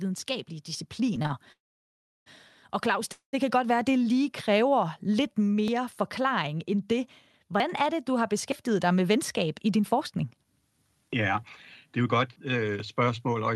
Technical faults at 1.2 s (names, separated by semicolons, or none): automatic gain rising; repeated stalls (stutter)